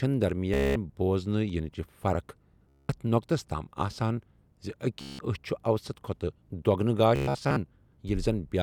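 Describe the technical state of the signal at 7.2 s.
At 7.2 s the signal sits inside a Bluetooth stutter running from 7.16 to 7.57 s. The wireless link dropped or delayed its audio packets, and each time data failed to arrive the receiver filled the gap by replaying its most recent buffer. About 276 ms of audio is lost, scattered over roughly 406 ms, with the longest unbroken run lasting 116 ms. The speech breaks into a buzzing, machine-gun repetition, then resumes further along as though it had kept playing.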